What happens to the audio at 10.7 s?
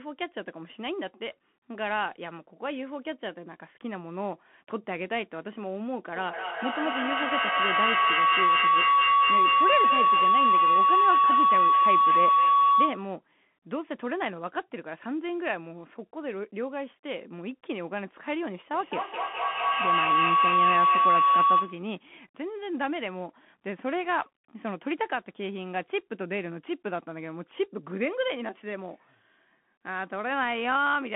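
At 10.7 s a feedback howl sits over the speech: a tone around a kilohertz that pulses roughly every fifth of a second and rises to about 9 dB above the speech. It lasts from 6.15 s to 13.17 s. Two devices in the same room are on one call, so sound loops from loudspeaker to microphone and gains level on each trip, narrowing onto the frequency the loop favours.

Underneath, the Bluetooth CVSD headset codec keeps the sound narrowband, with nothing above 3.8 kHz, a granular hiss and scratchy s sounds. Its one-bit, adaptive-step coding cannot follow fast, loud high content.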